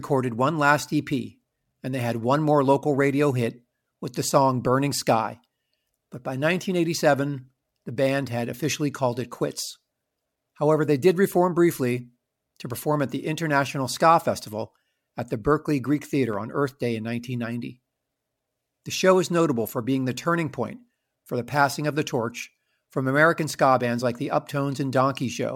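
At 8.72 s, between "the band had" and "called it quits", and again at 16.33 s, a sharp click sounds, likely dropped samples. Each is a thin vertical spectrogram line where the waveform jumps.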